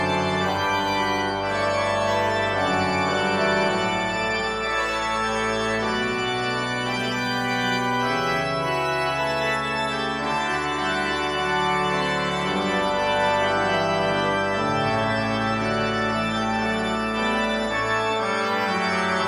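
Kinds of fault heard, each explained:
Nothing here to flag, as the audio runs along without any technical faults turning up at any point.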